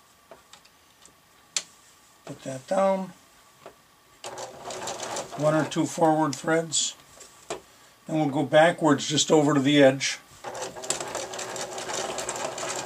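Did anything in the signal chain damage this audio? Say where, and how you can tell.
No, nothing along the chain from capture to playback leaves an audible mark on this one, so there's nothing here to point to.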